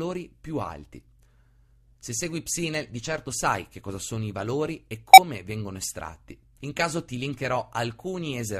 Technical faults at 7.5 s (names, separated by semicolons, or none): none